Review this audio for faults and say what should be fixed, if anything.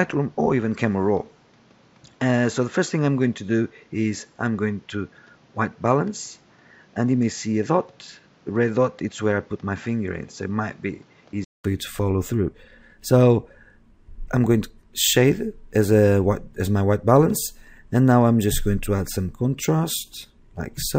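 From 0.0 to 11.64 s the sound is dull and boxy. Nothing reaches above 7.6 kHz. It sits around 5 dB quieter, over a noise floor roughly 35 dB down. At 11.64 s a gap of 200 ms follows. Then the sound clears up and opens out. This is most likely an input switched to a poorer device: a narrower-band microphone or headset profile captured the first half, before the system changed back. Fix the input device and disable automatic switching before recording.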